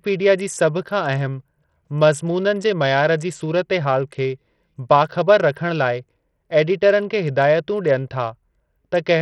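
A speech clip carrying heavy Bluetooth SBC compression across its whole length: the treble thins and flickers in and out, and a gritty, grainy noise with aliasing clings to the voice, which fits a small bit pool at around 64 kbps. What sets it apart from an ordinary low-pass or a low-bitrate MP3 is the coarse, unmasked grit across a few wide bands, the likely mark of a codec with no real hearing model.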